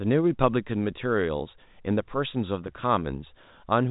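Nothing faulty can be heard in this speech recording.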